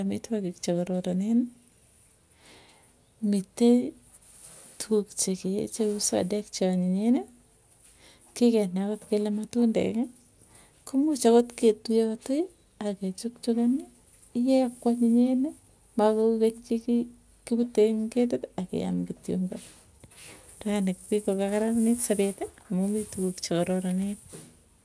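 Nothing in this speech recording stood out as a technical fault on listening.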